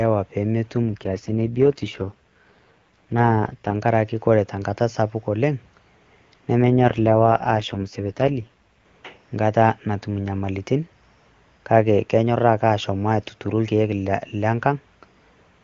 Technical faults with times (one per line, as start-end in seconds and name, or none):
0.82-3.76 AMR rate drop
6.63-8.84 AMR rate drop